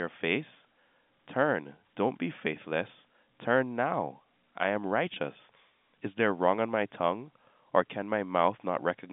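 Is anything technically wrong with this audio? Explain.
Yes. At 5.14 to 5.16 s, just after "now I am", packet loss with pitch repetition: the last pitch period is looped across a gap that fits a single lost 20 ms packet, giving a brief held buzz rather than the silent hole of a plain dropout.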